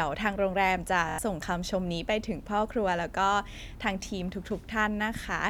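A speech clip with a repeated buffer from 1.09 to 1.18 s. One slice of about 23 ms, which fits a 1024-sample buffer, plays four extra times with a hard join at each repeat, giving a short stutter because fresh audio arrived late. Roughly a tenth of a second of speech is lost.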